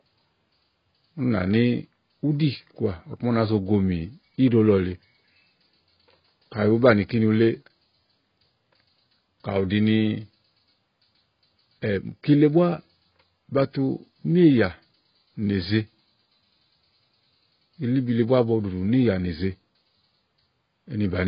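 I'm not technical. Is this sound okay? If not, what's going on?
No. The speech sounds dull and muffled from start to finish, with nothing above about 5.1 kHz, so the crisp edges of consonants like s and t are missing. The likely cause is heavy AAC compression, which saves space by discarding detail the ear is expected to miss. A simple filter or a covered microphone would only make it dull, but here there is also a watery, warbling, fizzy quality on held sounds and hissy consonants.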